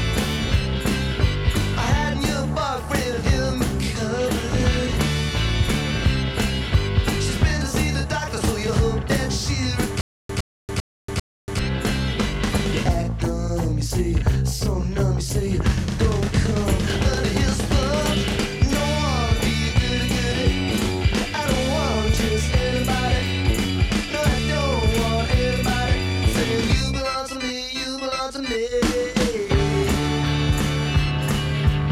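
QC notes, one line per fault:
10.01–11.59 s, stutter with silent gaps: the stream likely stalled, replaying its last fragment at each retry before running dry. A 112 ms burst repeats four times, separated by 283 ms of digital silence at a steady 395 ms period, and the intended audio there is lost.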